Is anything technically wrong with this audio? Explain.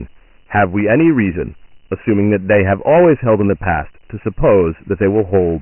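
Yes, two faults run through the whole speech clip.

Hard clipping: the signal is driven about 10 dB past full scale, so a small share of peaks are cut flat, adding harsh crackle on loud syllables.

Dialogic VOX ADPCM: nothing is present above 3 kHz, which points to 4-bit ADPCM at 6,000 samples per second. The coarse coding leaves heavy gritty hiss that tracks the speech.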